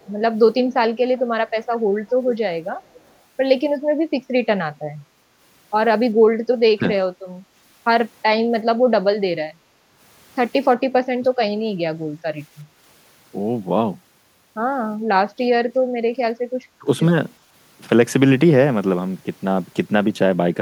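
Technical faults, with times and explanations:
0.01–0.09 s, 2.27–2.31 s, 2.85–3.12 s: echo leak. A faint delayed copy of the speech, 371 ms behind and roughly 20 to 35 dB down, likely loudspeaker pickup the echo canceller missed.
6.65–6.83 s, 11.19–11.28 s, 16.81–16.87 s: speech suppressed in double talk. The speech dips by roughly 25, 15 and 10 dB for about 150, 100 and 70 ms, likely the canceller attenuating during overlapping talk.
12.65–12.77 s, 15.81–15.93 s: background gated by the echo canceller. Room sound briefly drops by about 6 and 9 dB while the canceller clamps the microphone, then recovers.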